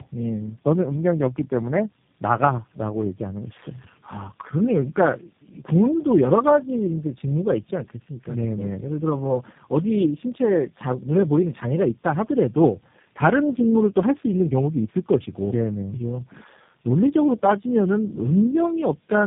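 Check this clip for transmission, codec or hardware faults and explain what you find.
One fault runs through the whole clip. Tandem speech coding, throughout: about four speech codecs in a row, apparently ending in G.729A, each re-coded the previous one's damage. The result is rough, muffled, warbly speech with nothing above 3.5 kHz.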